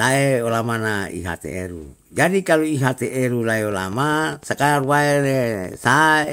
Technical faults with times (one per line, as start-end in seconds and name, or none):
3.72-6.25 train of clicks